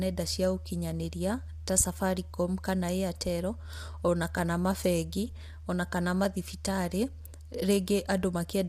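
From start to finish the speech sounds rough and grainy, consistent with low-delay AAC compression, likely AAC-ELD at a rate that fits about 32 kbps. Its short frames blur pitch harmonics, so a spectrogram shows noise filling the gaps between harmonic lines and a smeared upper band.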